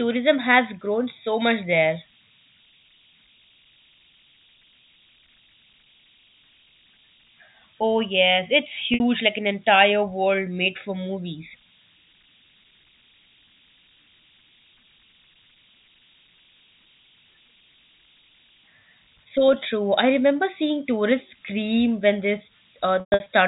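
Converter idle tones run through the whole clip: an undithered delta-sigma converter settles into repeating bit patterns on quiet input, leaving a whistle around 3 kHz, about 32 dB below the speech.

Packet loss with pitch repetition appears at 8.94 s, between "yes it's" and "like an entire world": 60 ms went missing, which fits three 20 ms packets, and the last pitch period was repeated, giving a brief held buzz. At 23.0 to 23.26 s, about 200 ms was lost across 280 ms, with the longest gap 120 ms, so the repetition fades toward silence before the speech cross-fades back. Both events pass through G.711 telephone coding, which limits everything to below 4 kHz.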